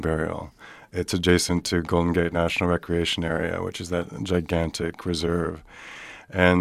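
No technical faults can be heard anywhere in this speech recording, and the signal holds steady throughout.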